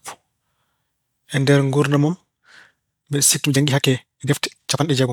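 A time-stretched section runs from 3.41 s to the end of the clip, where the speech suddenly plays about 1.73 times faster while its pitch stays where it was. The likely cause is software squeezing that stretch to fit a shorter length by cutting out small slices of the waveform and joining what remains, which keeps the pitch intact. The result sounds rushed.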